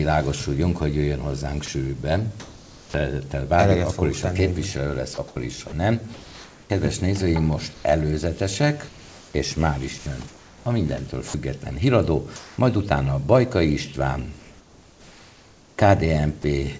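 Twice the sound briefly cuts out and is replaced by steady noise or near silence, at 1.66 s and again at 16.42 s, each gap lasting only around 20 ms. This is sound dropped by the voice detector: the sending side likely judged that moment to be background, stopped transmitting, and the receiver filled the hole with comfort noise until transmission resumed. In several pauses the background loses its texture and turns into a flat, even hiss, from 1.66 to 2.94 s, 7.74 to 7.84 s, 12.36 to 12.58 s, and 14.40 to 16.44 s. In the short 7.74 s pause it sits about 2 dB lower than the real background, and in the 12.36 s pause about 1 dB higher, with that background about 25 dB below the loudest parts. This is comfort noise in place of the background, likely from discontinuous transmission: with nothing to send, the sender went quiet apart from occasional noise descriptions, and the receiver synthesised an approximate noise floor. 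Between 5.14 and 6.70 s and again from 8.88 to 11.34 s the audio turns choppy, with quieter edges and fragments vanishing. This is sound chopped by the voice detector, which likely toggled transmission on and off repeatedly within each stretch. Throughout, the call path's G.722 coding at 64 kbps leaves nothing above 8 kHz.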